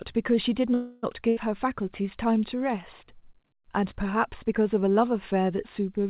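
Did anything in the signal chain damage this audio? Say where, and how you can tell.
Yes, at the network and jitter buffer. From 0.74 to 1.05 s the speech halts and its last sound is drawn out and fades, then resumes where it stopped. This is a call audio freeze, likely delayed packets draining the jitter buffer, inserting a gap without losing content.

A burst of packet loss follows at 1.29 to 1.39 s. Packets were lost or came too late to play, so the receiver held and faded the previous sound for about 80 ms. The speech then jumps ahead within its 4 kHz call-codec band, with that stretch missing.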